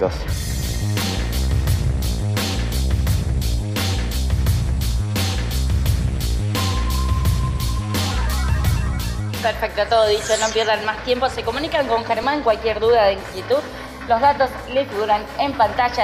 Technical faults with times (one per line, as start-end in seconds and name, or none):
12.23 repeated buffer